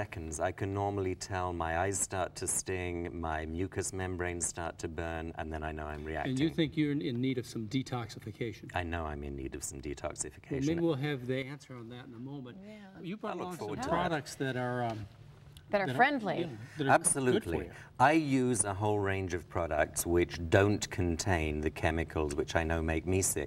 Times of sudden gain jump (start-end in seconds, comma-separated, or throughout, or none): 11.42-13.77, 19.78-23.46